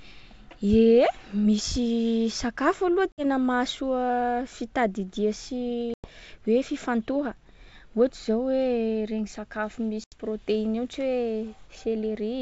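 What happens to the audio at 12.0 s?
Nothing goes wrong at 12.0 s; the speech stays intact there, carried by G.722 wideband telephone coding at 64 kbit/s with at most a faint hiss in the upper band.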